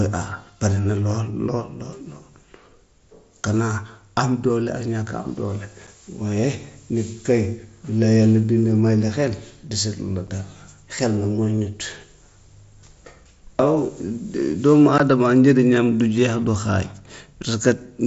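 Speech carried over a wideband mSBC headset link, with unconcealed Bluetooth headset packet loss at 5.87, 10.27 and 14.98 s. These are hard-edged gaps of 7.5 ms, 7.5 ms and 15 ms, the last consistent with two consecutive lost frames, filled with silence or an idle pattern.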